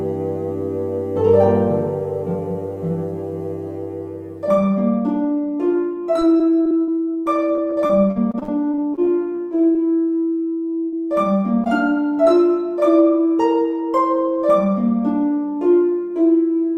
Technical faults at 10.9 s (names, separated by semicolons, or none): burst of packet loss